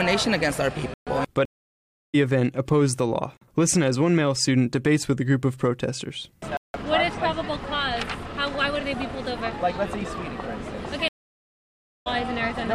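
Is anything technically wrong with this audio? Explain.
Yes. Blocks of digital silence occur at 0.94 to 1.07 s (128 ms), 3.37 to 3.41 s (about 43 ms, which fits a 2048-sample buffer at 48 kHz) and 6.57 to 6.74 s (171 ms). The output buffer likely went unfilled, so the audio drops abruptly to silence and back.

Stream reconnects occur at 1.45 to 2.15 s and 11.08 to 12.08 s, with silences of 683 ms and 978 ms. In each case the connection dropped and a fresh decoder restarted mid-stream. The audio resumes roughly half a second and about 0.7 s further on, skipping material.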